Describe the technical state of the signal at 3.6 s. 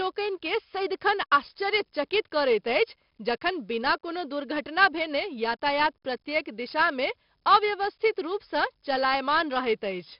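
4-bit ADPCM compression runs throughout, including at 3.6 s: coarse adaptive steps leave level-tracking gritty hiss and smeared attacks, with nothing above 5.3 kHz, which fits a rate near 44 kbps.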